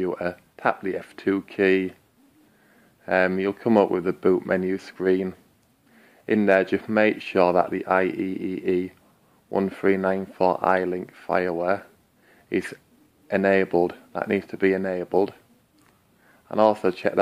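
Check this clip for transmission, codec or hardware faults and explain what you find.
Nothing stands out here, so there's nothing to flag from transmission, coding or the hardware along the way.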